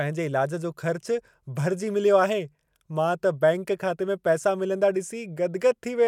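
A brief blip cuts into the speech at 2.67 s, gone almost as soon as it starts. It is the mark of damaged data in a compressed stream: a stretch of the encoded file was corrupted, so the decoder could not read those frames correctly, lost its lock on the frame sequence and had to hunt for the next valid frame header. The misread bytes come out as that short burst of noise.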